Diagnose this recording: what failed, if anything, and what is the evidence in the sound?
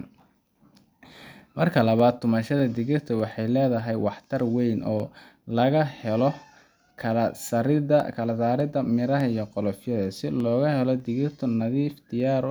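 A regular tick runs through the speech every 0.6 s, from about 0.20 s to 12.2 s, around twenty times in all. The fault sits at the driver or buffer stage and is likely clock drift buffer slips. Two unsynchronised clocks disagree by roughly 500 ppm, so the buffer creeps until a small block of around 15 samples is dropped or repeated. Random packet loss would instead leave irregular, audible gaps, not this strictly periodic, near-instant click.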